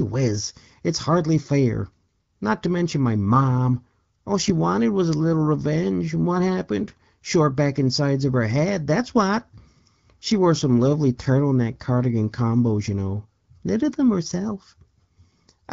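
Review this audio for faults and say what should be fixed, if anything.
No faults found; nothing needs fixing.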